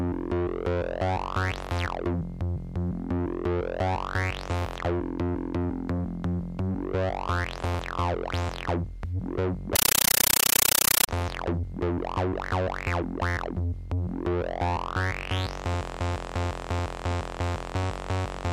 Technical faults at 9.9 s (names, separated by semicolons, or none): compressed stream played as audio